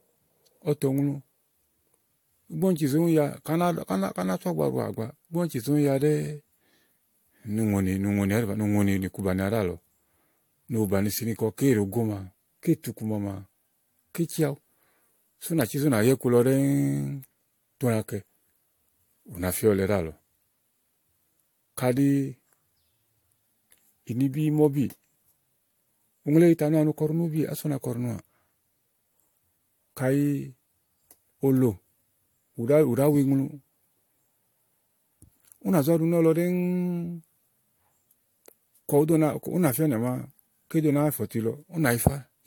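Right through the speech there's a swirly, hollow smear, with consonant attacks softened and nothing above 19.2 kHz. That's generation loss, likely from around five rounds of AAC-LC at 96 kbit/s, each pass requantising on a shifted frame grid and stacking up the holes.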